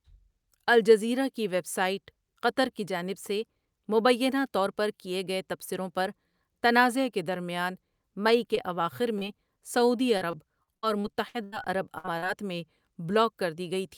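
A speech recording with three kinds of network damage in its last six seconds. Short concealed packet loss occurs at 8.55 to 8.59 s, 9.19 to 9.23 s and 12.18 to 12.24 s. In each case 20 to 40 ms of audio failed to arrive in time. The decoder patched the hole by extending the preceding sound, pitched if voiced and as shaped noise if not, then crossfaded back. This is heard as a brief smear or wobble where a small piece of the sound is lost. From 10.17 to 11.54 s the damage becomes repeated packet loss, producing the robotic sound typical of a struggling link. Nine separate gaps fall within those 1.4 seconds, the longest 81 ms, and about 380 ms of audio is missing in total. Roughly a quarter of the stretch is synthetic fill. Because each patch is followed closely by the next, the sound turns choppy, with fragments dropped throughout. At 11.98 to 12.06 s there is a burst of packet loss, about 60 ms lost in one run. 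Here the concealment holds the last sound and fades it down over the gap, leaving a short held buzz or decaying hiss. The audio then picks up further along with that section absent. The short loss at 12.18 s lands immediately after, so the damage runs together there.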